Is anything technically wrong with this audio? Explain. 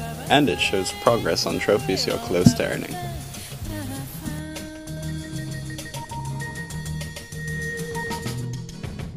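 Yes. From about 4.97 s to the end there's a doubled audio track: a second full-band copy roughly as loud as the original trails it by around 150 ms. It cuts in abruptly with no decay or room colour, likely from a second, slower capture path being mixed in.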